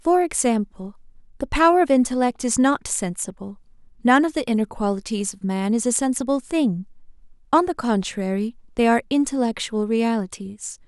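No technical faults can be heard anywhere in the speech recording, which holds steady throughout with nothing in the signal path interrupting or altering it.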